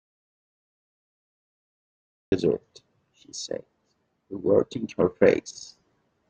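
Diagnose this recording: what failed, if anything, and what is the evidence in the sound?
Audio dropout to silence: the recording opens in dead silence, with no room tone, until speech cuts in mid-flow at 2.32 s. Unlike a noise gate or fade, nothing ramps. The input chain, likely a lost device or link, fed silence.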